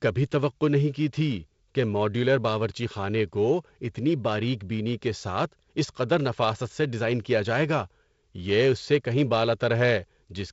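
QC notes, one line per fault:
Nothing stood out on listening to this speech clip.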